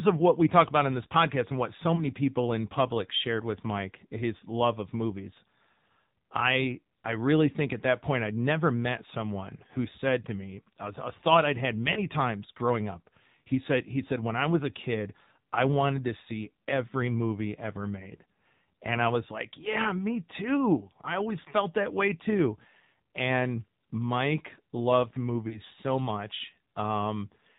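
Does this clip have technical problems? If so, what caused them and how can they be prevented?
Yes. The speech sounds buzzy, boxy and synthetic throughout, with nothing above 4 kHz. That is plainly audible damage from the AMR narrowband mobile codec, most likely a low mode around 7.4 kbps. Prevent it by using a wideband or higher-bitrate link.

Brief dips or warbles come at 1.96–2.05 s after "podcast and what so", at 11.94–12.00 s after "thought I'd had", and at 25.48–25.61 s just before "so much". These are lost AMR speech frames. Each sounds like a single 20 ms frame dropped by radio errors, which the decoder covered by reusing the previous settings at lower gain. Prevent this with a stronger signal or a wired or Wi-Fi call.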